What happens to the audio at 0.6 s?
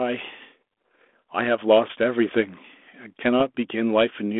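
Nothing goes wrong at 0.6 s: the speech there runs intact through the 32 kbit/s G.726 ADPCM telephone channel, with its narrow band of roughly 250 Hz to 3.5 kHz and light coding roughness.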